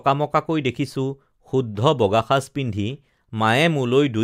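Speech recording with no audible technical faults.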